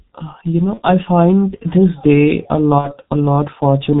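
The whole recording carries heavy G.723.1 codec damage. Nothing above 4 kHz survives, so the speech sounds muffled and hoarse. Consonants blur. The slow-moving voice model and thin data rate fit its 6.3 kbit/s mode.

From 0.74 to 0.80 s, just before "I find this day", VoIP packet loss concealed by the speech codec appears. The decoder fills about one 30 ms frame by repeating its last sound. A brief buzzy smear results. At 2.78 to 2.93 s, after "find this day a", about two frames vanish. The fill stretches longer and fades. The voice stays weak as it recovers.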